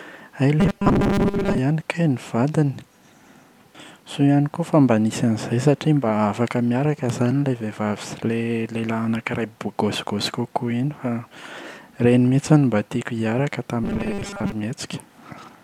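From 0.60 to 1.58 s and 13.84 to 14.52 s, robotic sound from repeated short buffers turns speech into a metallic 200 Hz buzz, likely from 5 ms chunks looping, leaving rigid evenly spaced spectrogram stripes.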